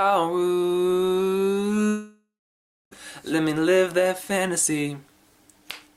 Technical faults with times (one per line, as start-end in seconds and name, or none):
1.87-2.93 long network dropout